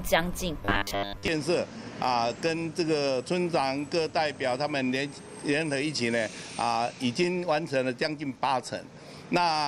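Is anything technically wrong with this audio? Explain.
Yes. From 0.65 to 1.28 s the sound collapses into a rigid, metallic buzz at 100 Hz: robotic sound from repeated short buffers. The likely cause is audio arriving too seldom, so a 10 ms buffer is replayed for most of that stretch while real audio is skipped.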